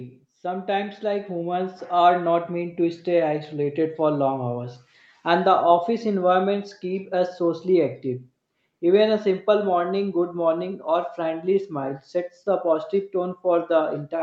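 From 0.41 s to 3.95 s, automatic gain rising lifts the level by about 10 dB. The gain control judged the input too quiet and kept raising it, so speech and background swell together. The waveform envelope widens steadily, and the spectrogram brightens evenly up to its 8 kHz ceiling.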